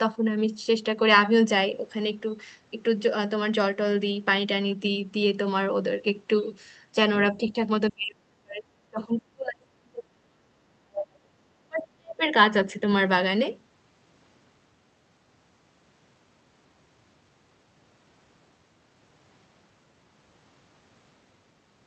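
From 7.21 to 12.28 s the speech keeps sinking and breaking up. At 7.21–7.56 s it dips only slightly, by about 5 dB. Then at 7.91–8.69, 8.89–11.36 and 11.6–12.28 s it falls away much harder, by as much as about 35 to 40 dB. This is speech suppressed in double talk, likely from an echo canceller that heard both sides at once, mistook the talker for loudspeaker echo and turned it down.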